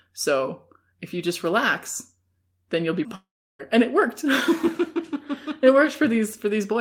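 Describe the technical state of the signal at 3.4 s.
After "then you'll be mm", a fading buzz decays into silence from 3.15 to 3.61 s, likely a long network dropout that lost 0.44 s of audio.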